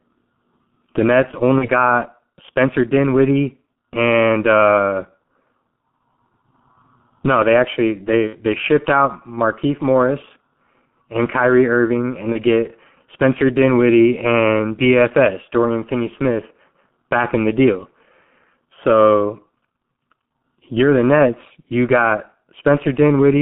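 Speech heard through the G.723.1 codec: a 150 Hz to 3.4 kHz telephone band, muffled and hoarse with smeared consonants, consistent with roughly 6 kbit/s coding. VoIP packet loss concealed by the speech codec fills gaps at 1.58–1.70 s, 8.27–8.36 s (between "no they actually" and "they shipped out") and 12.32–12.41 s with fading extrapolation. The middle gap sounds like two lost 30 ms frames; the others like one.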